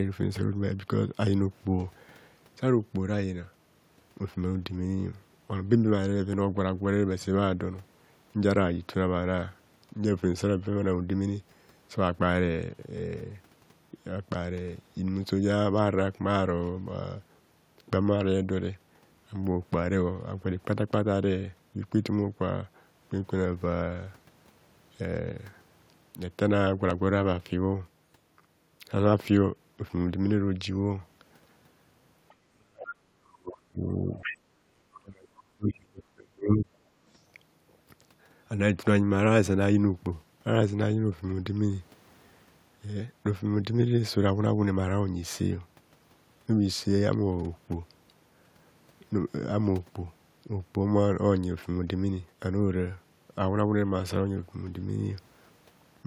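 At 26.91 s the program likely failed to collect a buffer before the hardware overwrote it, a dropped buffer (overrun). Roughly a millisecond and a half of audio is lost, and the two sides of the gap are butted together with no silence. The result is a brief jump where the speech skips ahead slightly.

From 32.28 to 32.34 s the echo canceller likely left a trace of the loudspeaker signal in the microphone, so the other side's voice leaks through. It sits far below the talker, very faint and easy to miss. At 32.46 s both sides are talking, and the canceller likely treats the talker as echo. Speech is suppressed in double talk until 33.85 s, dipping very deeply. Inside that stretch, at 32.90 to 32.94 s, the other side's voice leaks through again, as a short and noticeably louder scrap.

From 34.01 to 34.14 s the suppression likely returns in a mild form, a slight dip in the talker's level. 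Then, from 34.21 to 34.38 s, the far voice likely comes through at its strongest, clearly audible just under the speech. A third suppression, likely from the same double-talk confusion, runs from 34.61 to 36.75 s. The talker's speech is pushed down very deeply. At 34.95 to 34.99 s a quieter fragment of the other side's voice likely leaks through within it.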